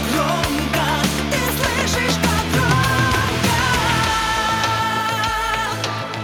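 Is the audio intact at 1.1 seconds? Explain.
Yes, at 1.1 seconds the audio plays through cleanly, with no dropout, click, distortion or other break in the signal.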